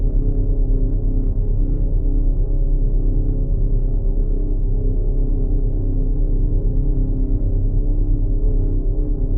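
Sample clock jitter runs through the whole of this audio: the converter's timing wanders by something like a microsecond and a half, so each sample lands slightly early or late and steep, fast-moving parts of the waveform pick up the largest errors. The result is a faint hiss or grain, roughly 65 dB below the signal, that swells with loud, bright passages and vanishes in silence. A spectrogram would show a low broadband haze tracking high-frequency energy, absent in quiet gaps; the waveform would look unchanged.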